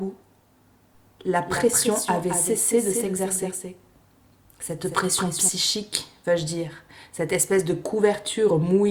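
A second, slower capture path or a misaligned edit has most likely mixed the same audio in twice, producing a doubled audio track from 0.95 s to 5.49 s. A full-band copy trails the original by roughly a fifth of a second and sits a few decibels quieter, so every onset is followed by a distinct, dry repeat with no reverberant tail. The copy appears abruptly at 0.95 s and cuts off just as sharply at 5.49 s.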